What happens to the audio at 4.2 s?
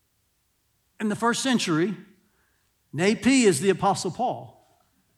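Nothing goes wrong at 4.2 s; the speech is intact at that moment, with no dropout, click, distortion or other fault.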